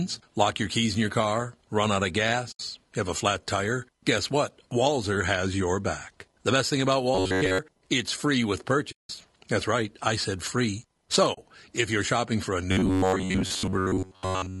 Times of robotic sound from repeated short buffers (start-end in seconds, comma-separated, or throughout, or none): 7.15-7.58, 12.72-14.60